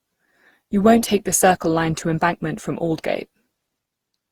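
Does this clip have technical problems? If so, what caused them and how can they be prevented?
Yes: generation loss throughout, a swirly, hollow smearing with blurred consonant onsets, likely from around ten Opus re-encodes at roughly 64 kbit/s, worse than one pass at that rate. Prevent it by keeping a lossless master and encoding only once.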